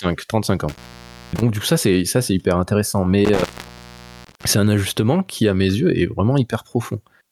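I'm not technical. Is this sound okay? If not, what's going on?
No. A cable or plug in the recording chain is loose, an intermittent contact, and it briefly breaks the connection twice. Each time the speech drops out for roughly half a second to a second, with a crackle as the connection breaks and returns and faint hiss in between. This happens from 0.69 to 1.42 s, just before "du coup ça c'est", and from 3.25 to 4.44 s, between "ça c'est hyper intéressant" and "c'est un ajustement qui".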